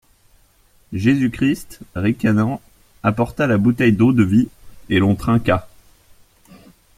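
No technical faults heard.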